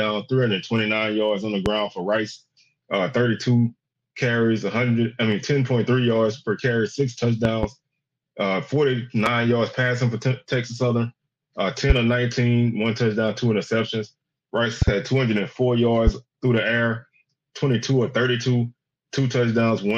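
Loud pops break into the sound six times: 1.66–1.69 s, 7.45–7.66 s (a double pop), 9.26–9.29 s, 11.90–11.93 s, 14.82–14.91 s (another pair) and 16.07–16.10 s. Each hits around 15 dB above the surrounding level as a sharp pop, while the sound carries on beneath it. The likely cause is an electrical transient, such as a switch, connector or static discharge, injecting a voltage pulse that the downstream circuitry rounds.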